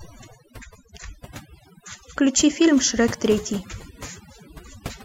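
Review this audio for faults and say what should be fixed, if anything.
Overdone noise removal runs through the whole speech clip. The reducer clamps individual frequency bands down whenever they sit near its noise estimate, so the gaps fall to near silence with twinkling specks, and quiet speech detail is stripped. Unlike a plain low-pass or bandwidth limit, the loss flickers band by band rather than cutting cleanly. Prevent it by setting the reduction amount gentler and checking quiet passages before committing.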